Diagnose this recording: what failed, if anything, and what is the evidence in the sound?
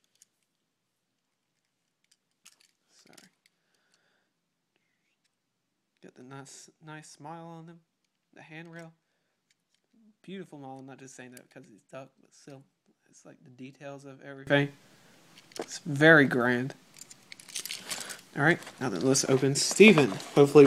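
The likely cause is one channel inverted somewhere in the analogue wiring, a polarity swap on one leg of a stereo pair, so that summing to mono cancelled everything common to both sides. From the start until 14.47 s the whole sound, background included, sits about 22 dB below the rest, leaving only the residue where the two channels differed. At 14.47 s the full level returns, marking where correct polarity was restored.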